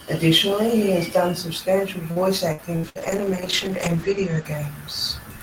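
Right after "he has done substantial", from 2.11 to 2.98 s, repeated packet loss leaves four gaps, the longest 70 ms. Each is patched with stretched sound, giving choppy, robotic speech.

From 2.86 to 4.51 s, a call bitrate drop sets in. The speech turns muffled and rough, with the top cut from 20 kHz to 8 kHz, pointing to a fall from 32 to 10 kbps.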